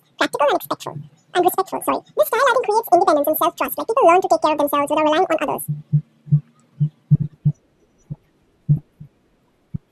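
Throughout, the speech is read two samples at a time, at double speed and an octave higher; a spectrogram shows harmonics stretched upward.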